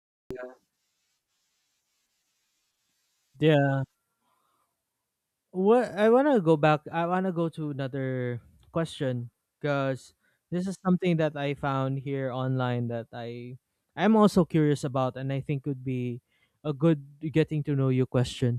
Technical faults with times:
0.00-0.31 cut-off start

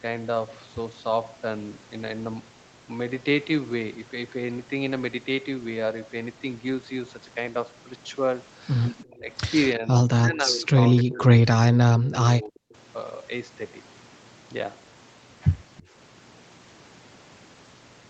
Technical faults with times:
9.04-9.29 speech suppressed in double talk
9.76-11.41 speech suppressed in double talk
11.98-12.68 speech suppressed in double talk
12.11-12.15 echo leak
12.70-12.74 echo leak
15.77-15.83 echo leak

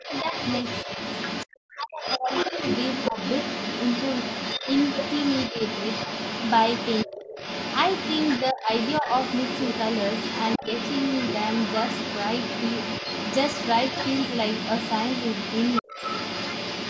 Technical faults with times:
0.00-16.89 other side's voice leaking through
0.06-0.25 speech suppressed in double talk
1.74-2.53 speech suppressed in double talk
3.11-3.16 speech suppressed in double talk
7.06-7.37 speech suppressed in double talk
8.52-9.06 speech suppressed in double talk
15.81-16.00 speech suppressed in double talk

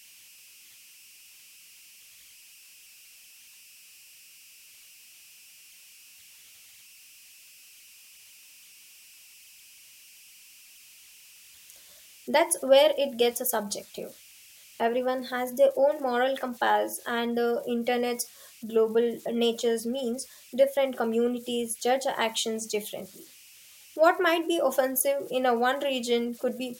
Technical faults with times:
0.00-26.80 converter idle tones

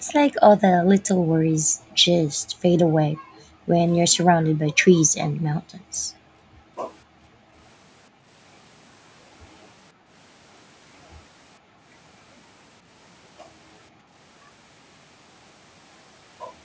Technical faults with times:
0.00-0.06 background gated by the echo canceller
0.70-3.74 background gated by the echo canceller
4.24-7.55 background gated by the echo canceller
8.10-8.27 background gated by the echo canceller
9.93-10.11 background gated by the echo canceller
11.59-11.84 background gated by the echo canceller
13.90-14.12 background gated by the echo canceller

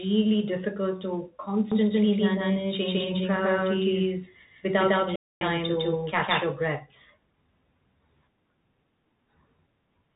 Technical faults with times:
0.00-10.15 Bluetooth CVSD headset codec
1.72-6.44 doubled audio track
5.16-5.41 playback stall

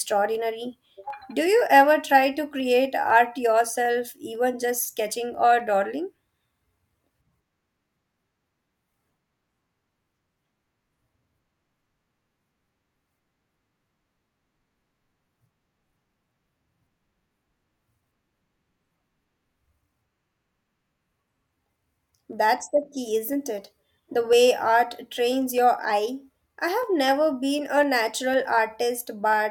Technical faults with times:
0.10-29.33 periodic USB or driver dropouts

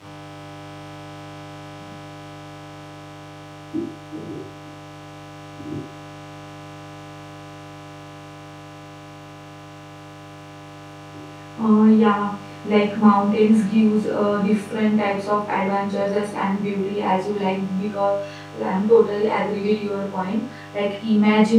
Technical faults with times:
0.00-21.59 mains buzz

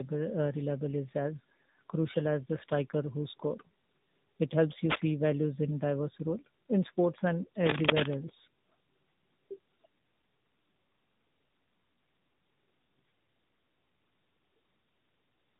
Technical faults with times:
0.00-15.59 tandem speech coding
4.90-5.11 cable scratch noise
7.63-8.15 cable scratch noise

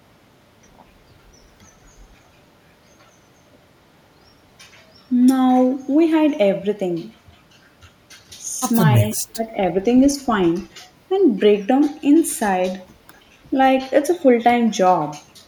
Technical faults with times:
8.99-9.84 speech suppressed in double talk

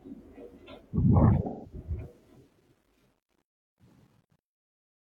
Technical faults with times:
1.46-1.74 AAC frame loss with concealment
2.01-5.02 truncation distortion on a fade

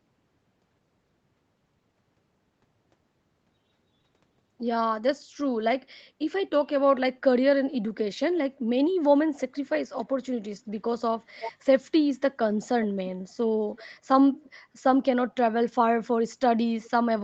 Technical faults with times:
9.93-10.03 echo leak
11.39-11.52 echo leak
13.75-13.84 echo leak
14.43-14.49 echo leak
16.81-16.90 echo leak

